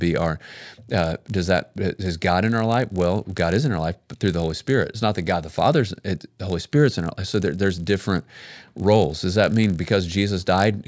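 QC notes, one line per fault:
throughout, resampler restarted on every block: a steady 50 Hz buzz under the speech, gone in pauses. Each 20 ms block was converted alone, which fits a 48 kHz to 16 kHz change, so every block edge lacks its real neighbours and ticks.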